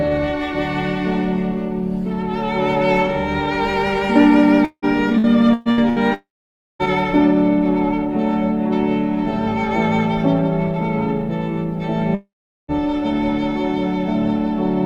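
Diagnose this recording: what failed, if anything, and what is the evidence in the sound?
The failure is in the network stage. Between 4.65 s and 5.99 s the sound turns choppy and robotic, with five short holes, the longest about 176 ms. Each hole is filled by stretching the last received sound, so roughly a third of that span is synthetic concealment rather than real audio. This is repeated packet loss: packets keep arriving late or not at all, and the receiver's concealment runs again and again.

At 6.14 s to 6.82 s and again at 12.15 s to 12.71 s, the sound stops outright. The last sound carries on briefly as a fading buzz, then drops to silence for about 0.55 s and about 0.4 s respectively. The audio returns with the intervening material missing. The likely cause is a long network dropout: nothing arrived for over half a second, concealment gave out, and the lost audio was never played.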